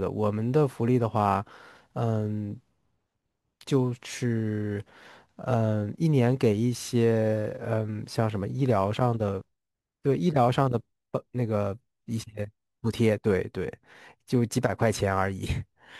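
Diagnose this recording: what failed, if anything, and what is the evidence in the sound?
Gritty, inharmonic fizz trails louder, brighter speech throughout, about 30 dB down: crude rate conversion, 48 kHz to 44.1 kHz by unfiltered nearest-sample picking.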